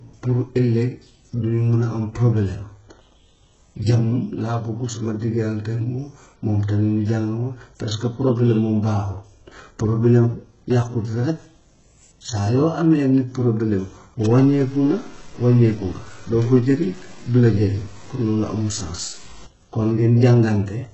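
Throughout the speech, the treble is smeared and metallic, with nothing above 7.9 kHz. Heavy HE-AAC compression at a very low bitrate is the likely cause, with the highs rebuilt from lower bands.

From 14.22 to 19.46 s, a grainy distortion follows the speech, roughly 25 dB below it. It fits low bit depth without dither, about 6 bits truncated.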